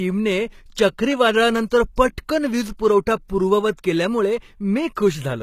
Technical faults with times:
0.00-5.42 HE-AAC compression
0.75 pre-echo
1.96 pre-echo
3.28 pre-echo
4.95 pre-echo

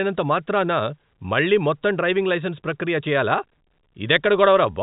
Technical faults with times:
none

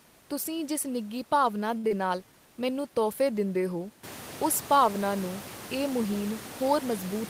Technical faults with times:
1.77-1.86 short stall from a late packet
1.88-1.92 short concealed packet loss

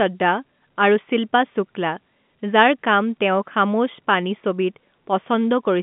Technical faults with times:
none

